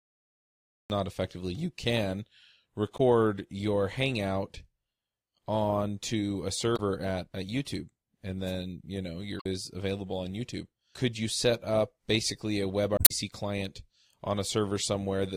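The speech begins with a cut-off start: from 0 to 0.90 s there is only digital silence, and then the sound appears abruptly mid-syllable with no attack. The recording or stream began late. On a spectrogram, a blank stretch ends at a hard vertical edge.

Damaged data in a compressed stream first appears at 2.94 to 3.00 s and again at 6.73 to 6.80 s. Corrupted frames left the decoder out of sync while it hunted for the next valid frame header, producing brief glitches. Each shows as a narrow smeared or garbled patch on the spectrogram.

At 8.45 to 8.53 s comes a wireless microphone noise hit. The FM radio link faded as reflections cancelled, and receiver noise surged into a short swish of static. It appears as a brief broadband haze across the spectrogram, with a fuzzy thickening on the waveform.

The same data damage returns at 9.37 to 9.46 s and, longest, at 12.95 to 13.11 s.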